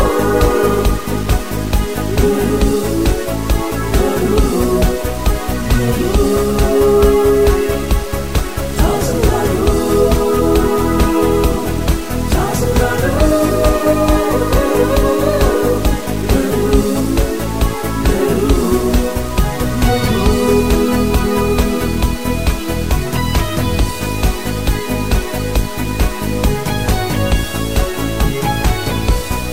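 From start to finish the audio carries grainy, signal-dependent distortion typical of low bit depth without dither, likely from truncation to about 5 bits. With so few steps, the rounding error tracks the sound and sits only about 20 dB below it, so quiet passages turn gritty and fade into sputtering or silence. A waveform zoom shows coarse staircase levels; a spectrogram shows broadband hash rising and falling with the signal rather than a steady noise floor.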